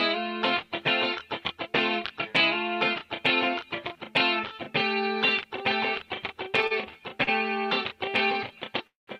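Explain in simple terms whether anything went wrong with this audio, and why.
A short stall from a late packet happens twice, at 6.67 s and again at 7.24 s. Each time a piece of audio arrived late, and the receiver had nothing left to play, so it stretched the last bit of sound for about 35 ms until the late piece came in. Nothing is lost. The sound just hangs for a moment with a slight buzz or dip, then carries on from the same spot, a little behind.

A call audio freeze follows at 8.87 s and lasts until 9.09 s, about 0.2 s. The sound holds briefly, then drops to silence for about 150 ms before resuming where it left off. This was likely caused by a longer delay on the way that emptied the receiver's waiting store, leaving it to fill the gap until the audio caught up.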